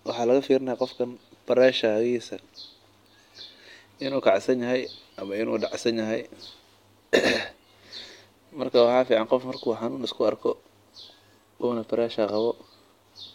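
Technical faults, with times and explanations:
0.13–13.34 s, clock slip clicks: faint ticks roughly every 0.15 s, likely single-sample slips between unsynchronised clocks about 200 ppm apart, steadily spaced unlike random dropouts.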